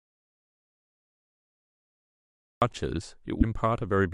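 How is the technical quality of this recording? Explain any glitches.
The recording has two clear technical faults: a long stretch of dead silence at the start and a brief decoding glitch shortly after the speech begins.

Audio dropout to silence, from the very start to 2.62 s: the input was likely lost, through a disconnected source, a broken link or a mute, while the recorder kept writing silence. The clip opens already in this state, with total silence and no room tone underneath. The speech then appears abruptly at 2.62 s, and nothing from before that point survives.

Damaged data in a compressed stream, from 3.38 to 3.44 s: corrupted bytes in the encoded file meant the decoder could not read the frames in that region. It lost sync and had to hunt for the next valid frame header before it could resume. The result is a short glitch of about 60 ms cutting through the speech.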